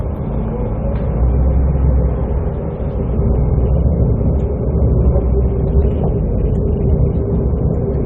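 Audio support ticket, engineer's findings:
No audible faults found.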